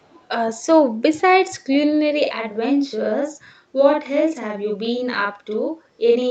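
From the very start to 0.28 s, a faint delayed copy of the speech trails the original by about 372 ms, sitting very low, around 40 dB beneath the direct sound. This is most likely an echo leak: a loudspeaker on the far end fed the talker's voice back into that side's microphone, and the echo canceller let a residue through. Unlike a doubling, this copy is far quieter than the original and arrives much later, as a separate ghost.

From 2.25 s to the end of the clip at about 6.3 s, the speech sounds doubled at equal strength, with a close slap trailing each sound by about 46 ms. This is channel delay (doubling): one channel runs late by a buffer's worth, which fits a 2048-sample buffer, and summing both to mono layers the two copies. It differs from the echo leak because the late copy matches the original in level and stays fixed throughout, rather than appearing as faint, brief scraps. Both faults sit within call-style bandwidth that stops at 8 kHz.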